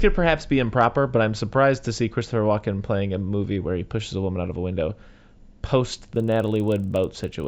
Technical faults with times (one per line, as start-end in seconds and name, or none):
5.92-7.47 resampler restarted on every block